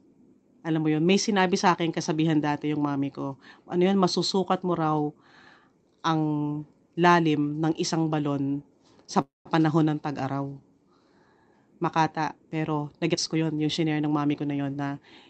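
At 9.21 s, just after "ng isang balon sa", packets were likely held up in transit and the jitter buffer ran dry, causing a call audio freeze. The receiver stretched the last sound into a fading buzz or hiss, then about 170 ms of silence, filling 0.24 s in all. The speech then resumes where it stopped, with nothing lost but a gap inserted.

From 13.09 to 14.60 s, a jitter buffer speed-up: too much audio had built up, so the receiver repeatedly cut short pitch-period pieces, around a fifth of a second in total. The speech runs at about 115% speed with unchanged pitch and sounds hurried.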